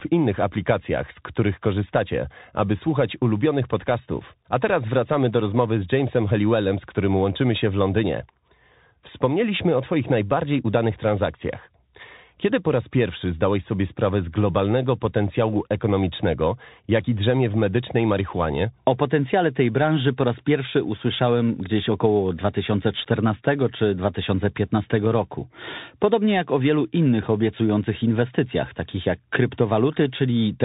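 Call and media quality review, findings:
Bluetooth CVSD headset codec, throughout: band-limited to 3.8 kHz, scratchy sibilants, granular hiss under speech; one-bit delta coding with adaptive step, consistent with a 64 kbit/s headset link.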